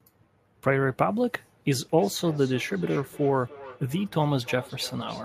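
From 1.97 s, feedback echo between two devices: a second device replays speech, returning at roughly third-second intervals, about 18 dB down, discrete unlike reverb.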